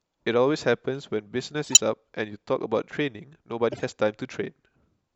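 A harsh chirp-and-noise burst cuts through the speech from 1.64 to 1.79 s, the louder of the two by about 20 dB, and a second, much quieter squeak follows from 3.72 to 3.84 s. Both are corrupt frame decoded faults: flipped bits in a handful of consecutive compressed frames each time led the decoder to apply wrong gains or misread codes, scattering energy into the wrong frequencies for roughly the span of the damaged frames.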